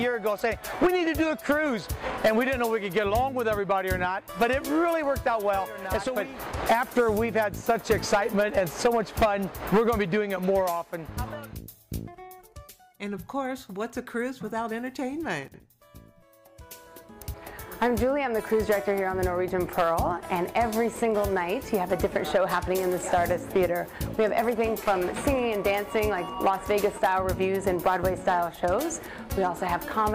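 At 15.48 s and again at 17.22 s the audio briefly jumbles: chunks out of order. In each case a 60 ms chunk arrived one chunk late, so it plays after the chunk that should follow it, swapping two segments across 15.48 to 15.6 s and 17.22 to 17.34 s. Nothing is missing, but the order is wrong for a moment, with three hard joins at each swap.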